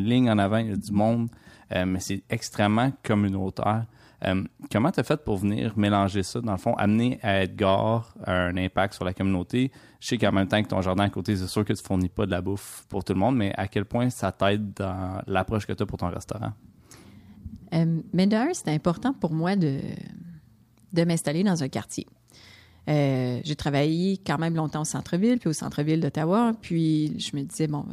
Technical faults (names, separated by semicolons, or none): none